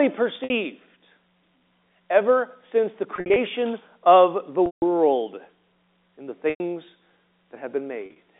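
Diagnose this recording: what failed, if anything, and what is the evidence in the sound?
Network packet loss with pitch repetition at 0.44, 3.16, 4.66, 6.5 and 8.06 s. The 60 to 160 ms gaps are bridged by a repeated, buzzy pitch cycle that fades out, not by hard silent dropouts.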